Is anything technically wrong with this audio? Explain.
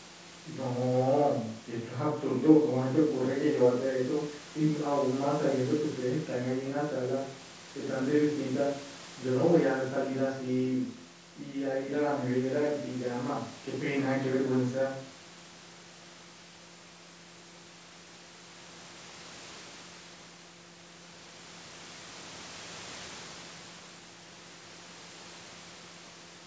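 No, nothing is technically wrong with this audio; it is speech carried through a call's microphone processing, with nothing above 8 kHz.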